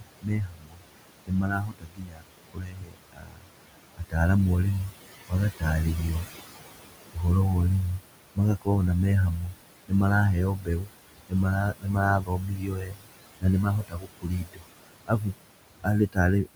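A speech recording where the background pumps down between phrases and swells back under the talking: these are noise suppressor artifacts, with the room noise (about 14 dB below the speech) being pulled down by about 20 dB frame by frame whenever the processor judges a band to be steady noise. Parts of the speech itself sound swallowed or faint, which is speech cut by the noise suppressor: from 0.0 to 4.15 s and from 10.57 s to the end, roughly three seconds of each stretch is dropped by up to about 22 dB, with shorter cuts of about 0.1–0.15 s at 4.88–5.63 s (about 17 dB), 7.99–8.68 s (about 18 dB) and 9.47–9.92 s (about 15 dB), where quieter speech was mistaken for background and turned down with it.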